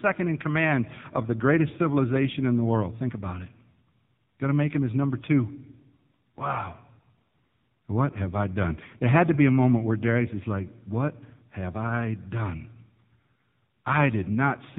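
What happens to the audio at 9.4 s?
At 9.4 s the speech carries the same AMR narrowband mobile codec damage heard across the whole clip. Nothing above 4 kHz survives, and the sparse pulse-driven vocal-tract model leaves the voice heavily buzzy and synthetic, which fits a low mode around 6.7 kbps.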